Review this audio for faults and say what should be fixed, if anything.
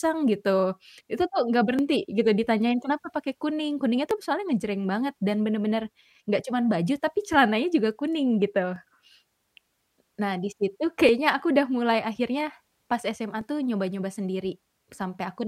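There's a clock drift buffer slip running through the speech: a regular click roughly every 2.33 s, from 1.79 s to 13.41 s, about seven in all. That steady spacing likely means two devices on independent clocks disagreeing by something like 500 ppm. The buffer between them creeps until a few dozen samples get dropped or repeated, and each jump shows up as a tick. To prevent it, lock both devices to one word clock or put an asynchronous sample-rate converter between them.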